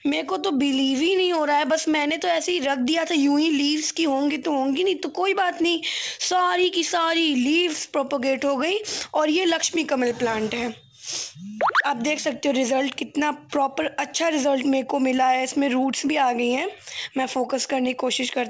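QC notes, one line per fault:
No faults found in the clip. It came over a WebRTC call path whose codec sounds like wideband G.722, so nothing is heard above 8 kHz.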